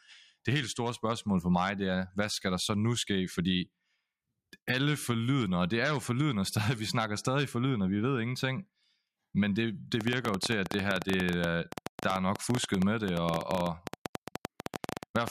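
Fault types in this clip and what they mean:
Train of clicks: from about 10.0 s to the end of the speech, a run of sharp ticks arrives at roughly 12 per second, unevenly spaced, around seventy in all, standing well above the voice, about 15 dB hotter. That pattern likely comes from interference or a faulty connection or power supply.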